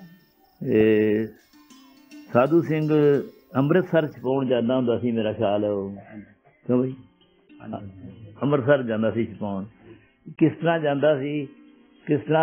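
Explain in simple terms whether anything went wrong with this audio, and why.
Adaptive stream at a lower bitrate, from 4.26 s to the end. Up to that point the sound is full and clear. Then, with no gap or pause, it abruptly turns dull and muffled, because everything above about 3.4 kHz is gone. The player was streaming a version that adjusts to the connection, and when the connection slowed it switched to a much more heavily compressed copy. That copy discards the treble to save data and never switches back.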